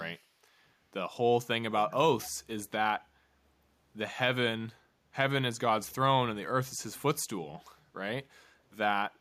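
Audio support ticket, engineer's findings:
Echo leak, 2.22–2.30 s and 5.90–5.95 s: faint speech copy 303 ms late, about 20 then 40 dB down. Likely far-end loudspeaker pickup getting past the echo canceller.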